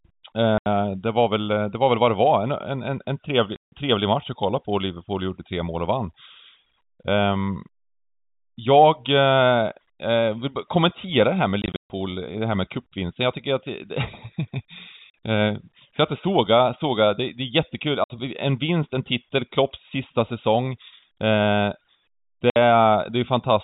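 Packet loss filled with silence cuts hard-edged holes at 0.58, 3.56 (after "en en trevlig"), 11.62 to 11.9, 15.1, 18.04 and 22.5 s. Lasting 40 to 200 ms, they fit 20 ms packets. Unlike concealment, nothing fills them; sound simply vanishes.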